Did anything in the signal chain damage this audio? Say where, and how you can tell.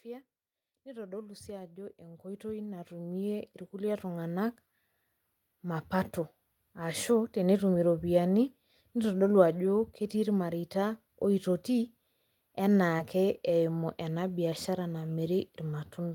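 Yes. Automatic gain rising, from 0.05 to 4.58 s, is a call-processing fault: the AGC judged the input too quiet and lifted its gain by about 17 dB over those seconds, so the speech and the background noise swell upward together rather than the talker getting louder.

Short concealed packet loss at 12.97 to 13.01 s is a network fault: about 20 ms of audio arrived too late for the decoder, which covered the gap by extending the preceding sound before blending back, leaving a brief smear or wobble in the speech.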